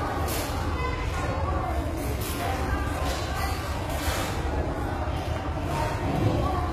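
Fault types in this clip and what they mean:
HE-AAC compression: The sound carries plainly audible codec damage that most likely comes from HE-AAC at a low rate, around 20 kbps. Only the lower spectrum is truly coded. The treble is rebuilt by copying lower bands upward, so high detail sounds bright but gritty and metallic, with harmonics that fail to line up. Plain low-bitrate MP3 or AAC would sound dull and swirly instead. Nothing is present above 14.9 kHz.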